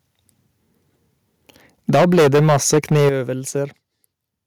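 From 1.89 to 3.09 s the speech shows microphone overload: peaks are driven about 14 dB past full scale, so roughly a fifth of the samples are flattened at the converter's limit, giving a harsh, crackling edge to the louder syllables, likely from input gain set too high. At 1.95 s the microphone volume is stepped down by about 2 dB, a small sudden drop that leaves the crackle in place. At 3.09 s, as the clipping ends, it is stepped down again by about 10 dB, so voice and background fall abruptly together, likely from the call software cutting the input level after detecting the overload.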